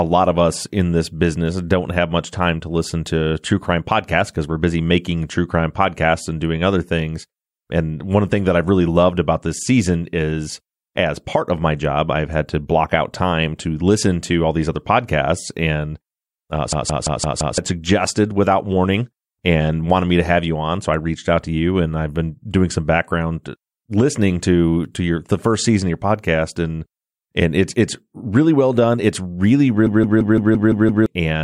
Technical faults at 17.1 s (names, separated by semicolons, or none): system hang loop